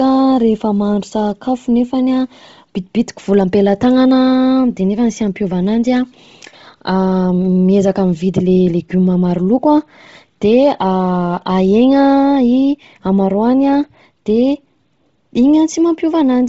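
Throughout the speech, everything above about 7.7 kHz is missing, and the upper band has a breathy, grainy noise texture. This is likely Bluetooth LC3 compression at a low bitrate, around 24 kbps with 7.5 ms frames, zeroing upper spectral detail and filling it with noise.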